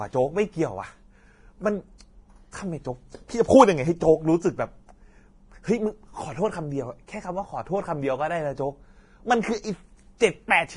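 Speech with heavy, steady codec damage throughout: nothing is left above about 10.6 kHz, and the treble that remains is hissy and grainy, with roughened tones, which points to low-bitrate Vorbis compression, likely near 28 kbps. Unlike band-limiting alone, the damage is a noisy grain where fine detail used to be. At 10.18 to 10.21 s there is pre-echo: a hiss about 30 ms long arrives just before a sharp attack and softens it, because the block's quantisation noise spreads ahead of the onset rather than sitting steadily under the sound.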